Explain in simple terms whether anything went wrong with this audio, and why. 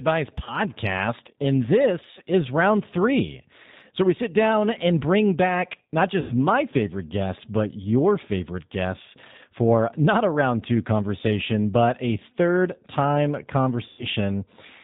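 Throughout, the speech sounds slightly rough, thin and synthetic, with nothing bright or crisp at the top. That is the G.729 codec, a phone-call compressor that rebuilds the speech from a rough model of the voice and discards everything above 4 kHz.

There are three brief glitches where the speech turns into a buzzy tone or a coloured noise that fades, then takes a moment to recover: around 0.44 to 0.61 s, at 6.21 to 6.32 s between "and bring back not" and "my favorite guests but", and at 13.87 to 14.05 s after "but a third time". This is VoIP packet loss concealed by the speech codec. Chunks of the call, roughly 30, 90 and 120 ms long, went missing, and the decoder guessed at them by stretching out the last sound it had.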